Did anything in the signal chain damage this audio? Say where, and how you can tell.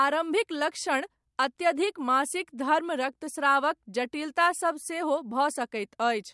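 No, nothing in this speech recording stood out as damage from any stage of the signal chain on listening.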